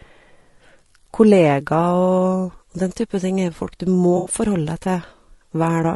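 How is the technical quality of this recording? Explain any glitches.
The technical quality is limited: compression damage is plainly audible throughout, and there is one brief dropout near the end.

Throughout the clip, the speech sounds rough and grainy, with noise filling the gaps between harmonics and a thin, synthetic top band. The likely cause is low-delay AAC compression (AAC-ELD) at a bitrate around 32 kbps. Its short frames resolve pitch harmonics poorly. Unlike ordinary low-bitrate AAC, it leaves the voice coarse rather than warbly.

From 4.17 to 4.31 s comes AAC frame loss with concealment. About 80 ms of audio, fitting a few lost frames, was rebuilt by the decoder from the last good spectrum. The result is a smeared, phasey patch rather than a click or hard gap, which sets it apart from a simple dropout.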